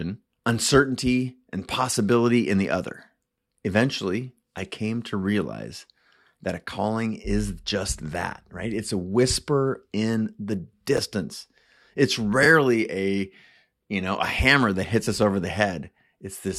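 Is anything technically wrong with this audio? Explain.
Yes, there are two brief chunks out of order faults in this speech. At 10.97 to 10.99 s, just after "a whisper in the", a 10 ms slice of audio plays one chunk later than it should. At 12.43 to 12.46 s, just before "a you know a", a 10 ms chunk plays two chunks late. Because the slice lands after material that should follow it, the waveform has three abrupt joins at each spot, heard as a tiny jumbled flutter.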